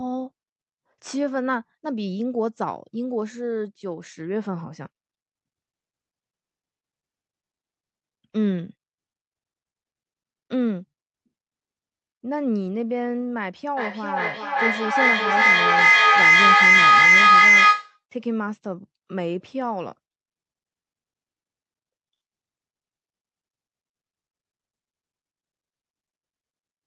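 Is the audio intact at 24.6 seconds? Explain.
Yes, the audio is intact at 24.6 seconds, with no dropout, glitch or other fault at that moment.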